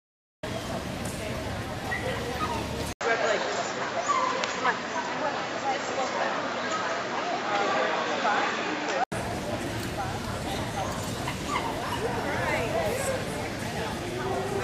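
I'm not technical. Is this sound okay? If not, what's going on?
No. From 2.93 to 9.12 s the sound turns duller and boxier, losing its top end above about 7.6 kHz. Its loudness shifts and a new background noise appears well beneath it, with a brief gap of about 80 ms at the switch. This is likely an input switched to a poorer device, such as another microphone. A simple tone change wouldn't bring its own noise, level and clean return afterwards.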